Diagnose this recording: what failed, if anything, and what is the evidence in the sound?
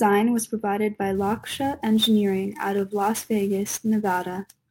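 The converter failed: from 1.15 s to the end at 4.70 s, the speech carries sample clock jitter. An unsteady clock, wobbling on the order of 10 microseconds, takes each sample slightly early or late, so steep parts of the waveform land at wrong values. The result is a hiss or roughness roughly 20 dB below the speech, strongest on loud and sibilant sounds and gone in pauses. A spectrogram shows a broadband haze that tracks high-frequency energy and clears in gaps.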